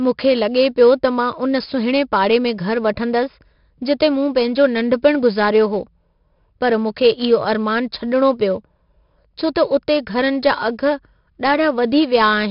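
From the start to the end of the recording, the speech carries 4-bit ADPCM compression, and the damage is heavy. Each sample is coded as a coarse step from a predicted value, so the error is a gritty hiss that rises and falls with the speech level. Sharp onsets smear where the step size lags behind. Nothing reaches above about 5.3 kHz, and at roughly 44 kbps that points to a low sample rate, which leaves the speech dull.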